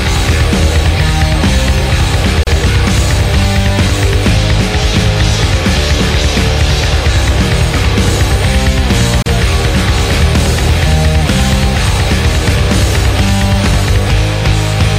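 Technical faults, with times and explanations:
2.43–2.47 s and 9.22–9.26 s, gap at a join of encoded pieces: the sound drops out for about 35 ms and then about 38 ms, then resumes where it stopped. Separately encoded pieces were joined untrimmed, so each piece's encoder start-up silence and padded final frame remain at the seam.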